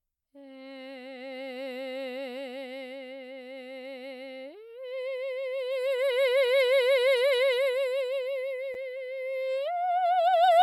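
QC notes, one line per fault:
8.74 s, block of digital silence: a single sharp tick cuts into the music, too brief to register as a gap. For about 7 ms the samples drop straight to silence and then resume, with no fade on either side, so the waveform jumps abruptly at both edges and the two discontinuities merge into one click. A hole this short points to an output buffer that wasn't filled in time, leaving zeros in its place.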